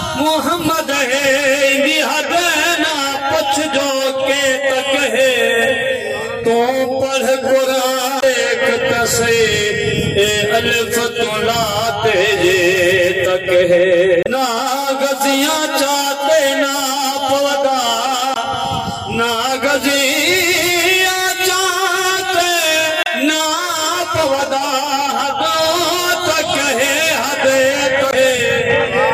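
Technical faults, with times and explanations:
8.19–8.24, 14.23–14.27, 18.33–18.37, 23.03–23.07 and 28.10–28.14 s, damaged data in a compressed stream: each brief glitch lasting about 40 ms comes from the decoder misreading corrupt frames and resyncing.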